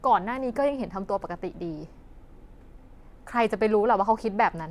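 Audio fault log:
No fault is heard in this speech clip.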